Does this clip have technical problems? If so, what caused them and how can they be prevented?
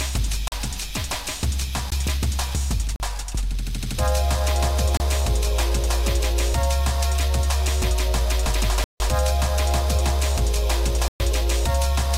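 Yes, a block of digital silence drops out at 0.48–0.52, 1.90, 2.96–3.00, 4.97–5.00, 8.84–9.00 and 11.08–11.20 s, as short holes of 17 to 160 ms. Zeros replace the audio when the output buffer goes unfilled in time or a calculation yields invalid numbers. Prevent it with larger buffers, real-time-safe processing and checks for invalid values.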